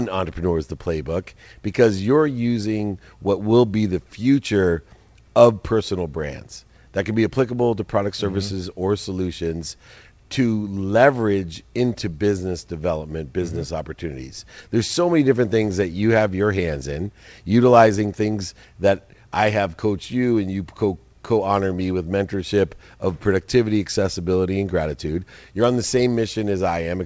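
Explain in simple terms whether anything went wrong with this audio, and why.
Nothing went wrong here; the audio simply came through an ordinary internet call, which is why the sound stops at about 8 kHz and lacks some of the airy top end, and that's just how this kind of call line normally sounds.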